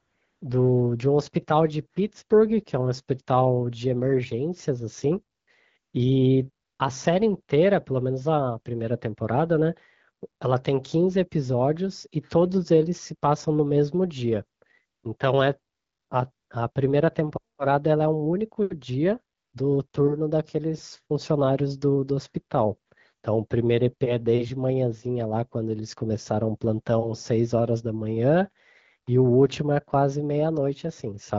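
In this speech recording, the phone's voice activity detection repeatedly decided the talker was silent and stopped sending speech frames, so the receiver substituted AMR comfort noise. The first 0.41 s is synthetic noise, and another twelve short gaps, from 20 ms up to 360 ms, cluster between 5.37 s and 19.93 s. In each gap the real background gives way to a smooth, steady hiss that switches in and out abruptly.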